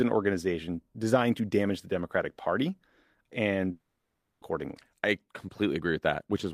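From 3.71 s to 4.43 s, a long network dropout likely interrupted the incoming stream. The receiver covered the gap by stretching the last sound into a fading buzz or hiss for about 0.7 s. After a brief silence, the speech resumes with 0.7 s missing.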